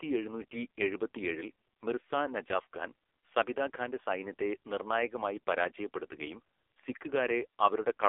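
From start to end, the speech carries the sound of an AMR narrowband mobile codec at a very low rate, which fits AMR-NB's 5.9 kbps mode. The vocal-tract model, fed only a few pulses per short subframe, renders the voice buzzy and synthetic, with heavy coding damage. The line band runs from about 300 Hz to 3.5 kHz. On a spectrogram everything above 3.5 kHz is blank, with a hard ceiling and thin, smeared harmonics beneath it.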